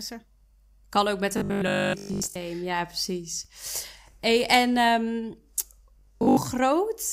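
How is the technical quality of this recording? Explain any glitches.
The speech has two stretches of robotic sound from repeated short buffers, from 1.38 to 2.36 s and from 5.99 to 6.37 s. In both, the voice turns into a stiff, metallic buzz at 50 Hz that only loosely tracks the original. That rate likely comes from the player running short of fresh audio and looping the last 20 ms or so, which fills most of each stretch with repeats while the real audio in between gets skipped.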